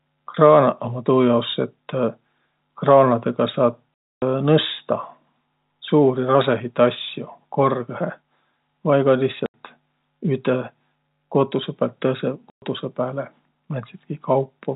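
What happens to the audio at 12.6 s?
The speech drops out completely from 12.5 to 12.62 s. This is packet loss filled with silence. A run of packets never arrived, and the receiver played nothing in their place. The gap lasts 120 ms, which fits six lost 20 ms packets. The sound cuts off abruptly, leaving a dead hole with hard edges. Around the hole, the telephone-band G.711 coding keeps everything below 4 kHz.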